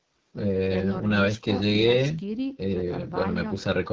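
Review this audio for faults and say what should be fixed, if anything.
The AMR wideband (HD Voice) codec roughens the speech throughout. The damage is plainly audible: a raspy, buzzy texture. Its pulse-driven vocal tract model has too few bits here, which fits the 8.85 kbit/s mode. Above 6.4 kHz, the band is filled with shaped noise. Prevent this by running the call at 12.65 kbit/s or higher.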